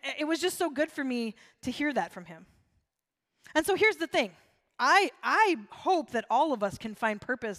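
Speech recording, no audible technical faults anywhere in the clip.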